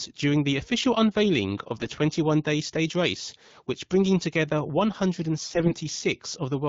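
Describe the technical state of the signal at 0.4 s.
At 0.4 s the speech is intact, carried cleanly through the AMR wideband (HD Voice) codec at 12.65 kbit/s with no fault present.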